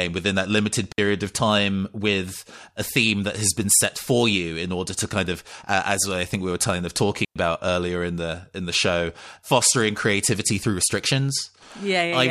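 At 0.92 s and again at 7.25 s, the speech drops out. This is a digital wireless dropout. The receiver lost data and muted briefly, for 60 ms and then about 110 ms. Each gap is clean near-silence, with no noise burst.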